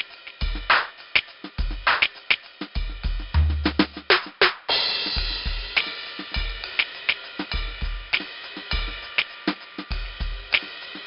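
4-bit ADPCM compression runs through the whole music clip. Each sample is coded as a coarse 4-bit step from a predicted value, with the step size adapting as the signal changes, and here the damage is heavy. The resulting error is a gritty hiss that swells with every loud passage and roughens sharp attacks. Nothing is heard above 5.3 kHz, leaving the music dull, and the sound fits a rate of about 44 kbps.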